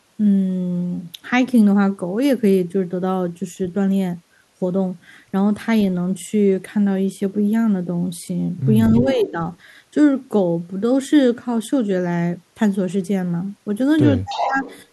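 Speech suppressed in double talk, 8.92 to 9.39 s: while the other side talks too, the speech dips by about 10 dB for roughly a third of a second. This is likely an echo canceller that could not separate its own talker from loudspeaker echo, so it turned both down.

Echo leak, 8.97 to 9.29 s: a delayed copy of the speech returns 328 ms late, about 10 dB below it. This is likely residue from a speakerphone whose canceller failed to remove what its microphone picked up.

Echo leak again, 14.29 to 14.86 s: the same 328 ms copy returns, now only about 5 dB down. It likely comes from the same incomplete cancellation.

Speech suppressed in double talk, 14.44 to 14.67 s: a shorter dip of about 10 dB during overlap. It likely has the same cause as the first.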